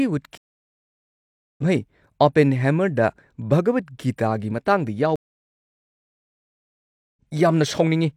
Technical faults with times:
0.37-1.63 stream reconnect
5.16-7.21 stream reconnect

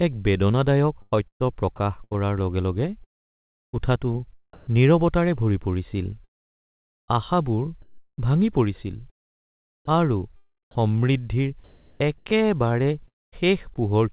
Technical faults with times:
1.02-4.73 sound chopped by the voice detector
6.24-7.10 long network dropout
6.24-8.18 comfort noise in place of the background
9.85-13.81 sound chopped by the voice detector

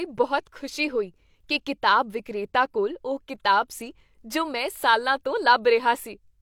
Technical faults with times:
none

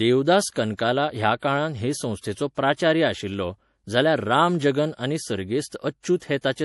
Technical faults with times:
0.00-6.64 MP3 compression
0.53-0.56 pre-echo

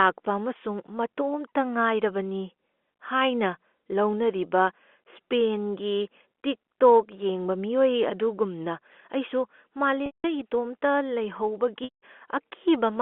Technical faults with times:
10.06-10.24 packet loss with pitch repetition
11.84-12.00 packet loss with pitch repetition

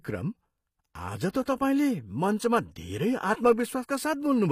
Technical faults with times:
0.00-4.51 HE-AAC compression
1.30-1.34 pre-echo

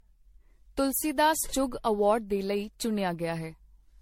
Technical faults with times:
0.00-4.02 generation loss

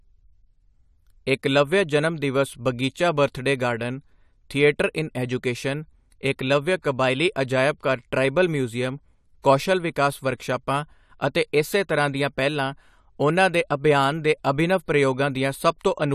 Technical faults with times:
6.82-6.84 pre-echo

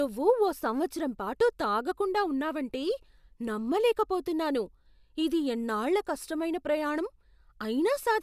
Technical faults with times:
none

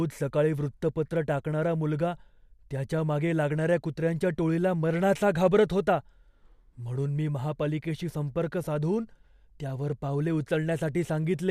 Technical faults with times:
none

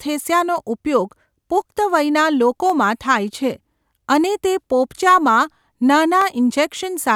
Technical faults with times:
2.70 dropped samples
4.24 dropped samples
6.21 dropped samples

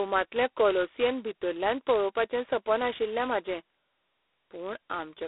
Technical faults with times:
0.00-5.27 G.726 ADPCM

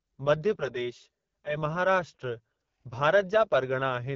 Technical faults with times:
0.00-4.16 AMR wideband (HD Voice) codec

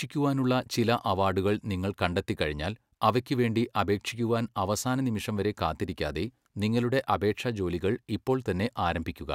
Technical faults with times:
none

